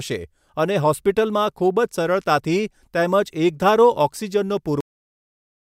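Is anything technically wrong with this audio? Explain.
Yes, there's a cut-off end: at 4.81 s the speech stops mid-sound and drops straight to digital silence, because the final buffers never got written.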